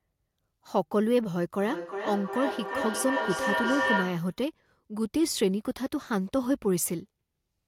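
From 1.61 to 4.41 s there's feedback echo between two devices: the speech loops back roughly every 400 ms, thinner and ringier, peaking at about -2 dB against the speech.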